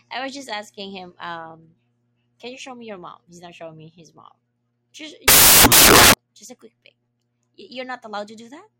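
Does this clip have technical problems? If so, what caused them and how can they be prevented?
Yes. From 5.28 to 6.14 s, just before "just a quick pic", the speech turns into loud, harsh broadband noise: samples built from the wrong bytes. A byte offset or swapped byte order turned each sample's noisy low bits into its large part. Preventing it means validating sample format, endianness and frame alignment when reading.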